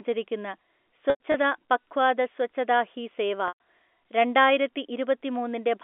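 Packet loss with pitch repetition appears twice. From 1.1 to 1.34 s, about 120 ms of audio goes missing in pieces spread over 240 ms, the longest gap 100 ms, just before "പഖ്വാദ സ്വച്ഛതാ ഹി സേവ". The receiver loops the last pitch period, so the sound briefly holds as a buzzy, frozen tone that fades away, which sets it apart from a hard mute or click. It happens again from 3.48 to 3.53 s, right after the same phrase, across the 250 Hz to 3.5 kHz telephone band.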